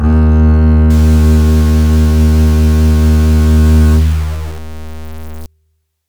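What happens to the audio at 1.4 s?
Low bit depth without dither runs from 0.90 to 5.46 s: the music was likely truncated to about 5 bits, leaving grainy, signal-following distortion only about 25 dB below it.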